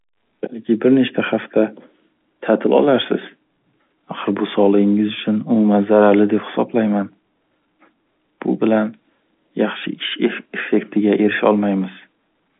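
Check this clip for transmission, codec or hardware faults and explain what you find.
No transmission, codec or hardware faults turn up in this speech, which carries the narrow 200 Hz to 3.5 kHz band of ordinary G.711 telephone coding, nothing above about 3.7 kHz, and only the faint level-following hiss that 64 kbps A-law telephone audio brings.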